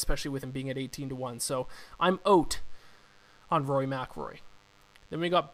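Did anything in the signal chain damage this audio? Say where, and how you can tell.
Yes. The damage is in the analogue wiring, and it runs the whole length of the speech. A thin, steady buzz sits under everything, well below the speech level, roughly 35 dB down. It repeats at 100 Hz and carries a dense stack of harmonics, which gives it that edgy, raspy texture. This is DECT cordless phone buzz. A nearby handset or base fires radio bursts every 10 ms. The audio circuit rectifies them into audible pulses.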